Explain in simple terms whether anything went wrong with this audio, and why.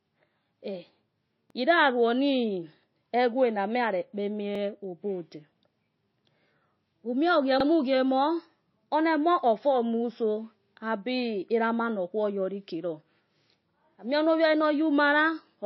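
Two things went wrong. First, the recording was likely squeezed hard by MP3 compression, which saves space by discarding sound the encoder judges unimportant. Here it threw away everything above about 5.8 kHz, so the speech sounds muffled and dull, and the lost detail gives it a watery, swirly quality. The damage is plainly audible across the whole clip.

Second, the audio was handled in 3-second pieces that overlap when joined back together, which is the fault called overlapping chunks. At each join, a 50-millisecond slice plays twice, producing a brief stutter or click. It happens at regular intervals, at 1.50, 4.55 (just after "egwe na nuya re"), 7.60, 10.65 and 13.70 seconds.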